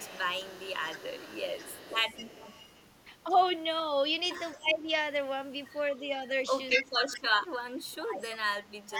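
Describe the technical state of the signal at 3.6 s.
At 3.6 s the signal is intact, with no audible fault at that point in the speech.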